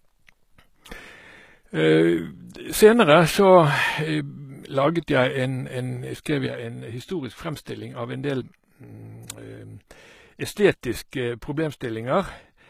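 From the start, the speech has treble that is bright but not genuine, with gritty, lispy sibilants and nothing above 14.9 kHz. The likely cause is HE-AAC compression: the upper band is rebuilt by copying lower bands upward, which fits a low bitrate around 20 kbps. A plain low-pass would dull the highs; this keeps them but makes them metallic.

At 6.47 s a sudden gain jump drops the whole signal by about 6 dB, speech and background noise together, in a single step that holds to the end. It is likely a digital gain change applied without a ramp. A fade or compressor would move gradually and release; this step is instant and permanent.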